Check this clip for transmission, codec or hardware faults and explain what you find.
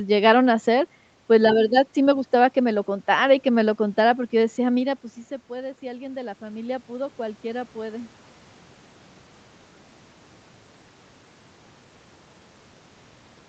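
One fault stands out, an automatic gain rising episode from 4.8 s to 8.17 s. Shortly before it, around 4.5 s, the talker drops back from the microphone and the level falls by about 15 dB. The automatic gain control responds by slowly raising its gain, about 7 dB over those three-plus seconds. Speech and room noise swell upward together rather than the speech alone returning. The level climbs audibly instead of recovering at once, and the background grows louder along with the voice as the gain rises.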